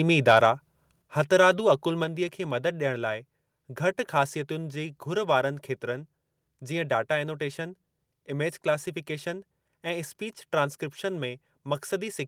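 From 0.28 to 0.46 s you get a harsh, crackly edge on the loudest syllables. That's microphone overload: the peaks run about 5 dB past the converter's limit, so their tops get flattened, likely from the mic input being set too hot. Only a small slice of samples actually clips.

Right after that, the microphone volume is stepped down twice: the voice and the background drop together by about 5 dB at 1.02 s, then about 3 dB more at 2.04 s, likely the call software pulling the input gain back after that distorted burst.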